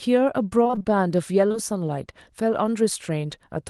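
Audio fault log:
0.63–0.86 s, repeated packet loss (robotic sound): six short dropouts in quick succession, the longest about 21 ms, with nearly half of this stretch rebuilt by extending the preceding sound. The repeated patching gives a choppy texture with small pieces missing.
1.48–1.56 s, short concealed packet loss: two back-to-back holes of about 20 ms each, at 1.48–1.52 s and 1.52–1.56 s, filled by continuing the last sound and blending back in. This is heard as a brief smear or wobble in the audio, on top of the call codec's band limit near 12 kHz.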